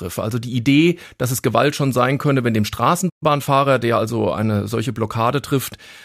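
Right after "sein könne wenn dem" at 3.09 s there's a playback stall: the speech just drops out for about 120 ms, most likely the player running dry or its thread getting blocked. From 3.23 to 4.03 s you get time-compressed catch-up, as the player trims its backlog by splicing out small chunks. The speech runs about 1.15 times fast at normal pitch, settling back by "eine solche".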